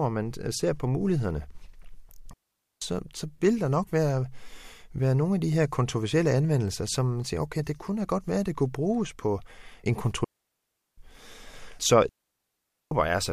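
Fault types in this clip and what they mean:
digital wireless dropout: The receiver stops getting enough usable data from the radio link and mutes its output, so the speech simply vanishes into near silence and then returns. Here there are three such holes: about 0.48 s ending just before "så vil der nok", about 0.74 s right after "kunne bruges på en", and about 0.82 s near the end. Unlike analog wireless dropouts, no hiss or noise burst surrounds the gaps; the fades are very short and clean.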